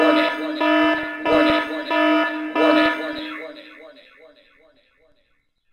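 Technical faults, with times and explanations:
0.80–1.72 s, 2.71–3.31 s, 4.69–4.77 s: DAB burbling. Uncorrected bit errors corrupt MP2 scale factors, so single sub-bands flare briefly. The spectrogram shows scattered short rectangular band blotches.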